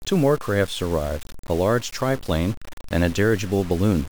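A speech clip with grainy distortion throughout that rises and falls with the voice, with quiet tails sputtering or dropping to silence. Unlike steady hiss, the error tracks the signal, pointing to low bit depth without dither, likely truncation to about 6 bits, leaving noise only around 20 dB down.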